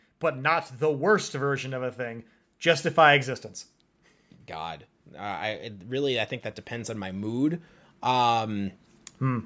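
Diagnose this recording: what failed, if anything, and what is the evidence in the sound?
Automatic gain rising, in the call processing stage. From 0.43 to 3.31 s the level climbs about 5 dB, then about 8 dB from 4.51 to 9.41 s. Speech and background swell together. The AGC judged the input too quiet and slowly raised gain.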